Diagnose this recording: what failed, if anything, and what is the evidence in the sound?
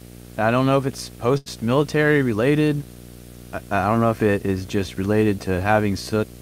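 Video or display buzz throughout: a 60 Hz field-rate buzz with hash, about 15 dB under the speech, coupled into the analogue wiring from a screen or video cable.

Short stall from a late packet, 1.37 to 1.48 s, after "don't know if it's": the network jitter buffer emptied, stretching the sound 87 ms with nothing lost.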